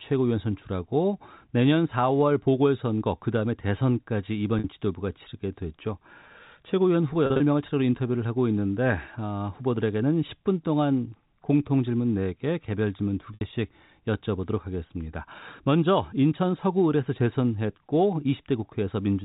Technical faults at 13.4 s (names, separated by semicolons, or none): packet loss with pitch repetition